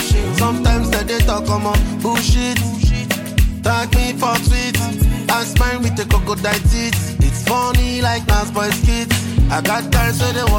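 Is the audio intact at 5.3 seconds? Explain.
Yes, the audio is intact at 5.3 seconds, with no fault audible at that point.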